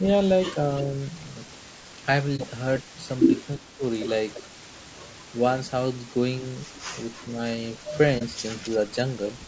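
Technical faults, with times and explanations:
Throughout, unreliable data bit: there's a steady crackle and fizz under everything, and it keeps going through the pauses. That points to one marginal data line flipping its bit in a random share of samples, so each error lands as an identical little spike.
Throughout, low-delay AAC compression: the speech sounds rough and grainy, with noise filling in between the harmonics and a top end that feels artificial. The likely cause is AAC-ELD at a low bitrate, which fits around 32 kbps. Its short frames can't pin down pitch harmonics well.
2.36 s and 8.18 s, AAC frame loss with muting: two brief dips, each about 30 ms long. At each one a single lost frame was decoded as silence, and the overlapping windows fade the sound out and back in smoothly around the gap.
3.56 to 3.83 s, speech suppressed in double talk: the speech dips by about 15 dB for roughly 300 ms. 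Likely both ends talked at once, and the echo canceller couldn't separate this talker from loudspeaker echo, so it ducked everything.
4.34 s, 6.74 s and 7.16 s, echo leak: short scraps of the speech come back 344 ms late, at about 15, 25 and 30 dB below the speech. Likely the far end is on a loudspeaker, and its echo canceller let some of the pickup slip back through.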